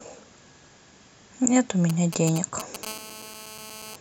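From 1.90 to 2.85 s, GSM signalling bursts from a nearby 2G phone are rectified into galloping dit-dit ticks and brief 217 Hz buzzes, roughly 10 dB below the speech. They are intermittent rather than continuous. From 2.87 to 3.96 s, GSM phone buzz replaces them as the phone enters a call: a steady, raspy 217 Hz tone rich in harmonics, about 16 dB down, with no gallop.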